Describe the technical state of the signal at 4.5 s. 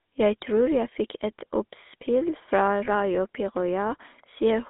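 At 4.5 s the speech has a buzzy, gravelly roughness and a narrow telephone band of roughly 250 Hz to 3.6 kHz, as it does throughout. This is GSM full-rate codec damage: the vocal tract is rebuilt from a thinned, pulse-driven excitation, fitting about 13 kbps.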